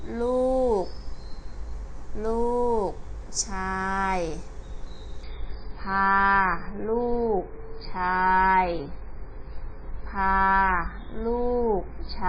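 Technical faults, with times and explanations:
5.24–12.29 s, adaptive stream at a lower bitrate: the sound abruptly turns dull and grainy with no gap or dropout, as the stream switches to a much leaner encoding after the connection slows. The swirling, watery texture fits MP3 at about 16 kbit/s in place of roughly 128 kbit/s before. On a spectrogram, energy above 5 kHz vanishes at a hard ceiling from 5.24 s onward, while the waveform continues unbroken across the switch.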